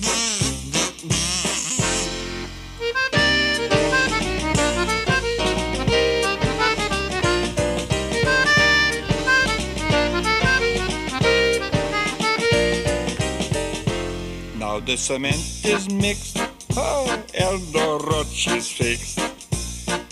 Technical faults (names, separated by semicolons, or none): none